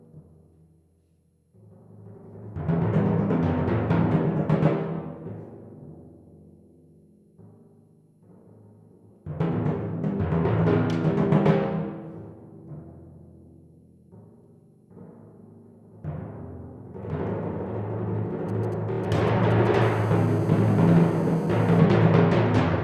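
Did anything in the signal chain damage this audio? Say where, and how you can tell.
Yes. From 18.49 to 19.76 s there are GSM signalling bursts: galloping clusters of short 217 Hz buzzes well below the signal. That's the analogue wiring picking up a nearby 2G phone's radio pulses and rectifying them.

Inside that stretch, from 18.92 to 18.99 s, you get repeated frames: a quick stutter where one block, which fits a 26.1 ms codec frame, plays three extra times. It points to storage or transmission duplicating compressed data, and it stretches the audio by 78.4 ms.

Right after, from 19.82 to 21.79 s, the GSM phone buzz takes over: a steady, raspy 217 Hz drone full of harmonics, about 30 dB under the signal. Same analogue pickup, but the phone is now transmitting its bursts steadily, 217 times a second, like during a call.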